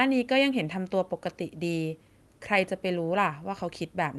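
No technical faults can be heard in the speech, which carries the ordinary character of a call codec path with its top end extending to around 12 kHz.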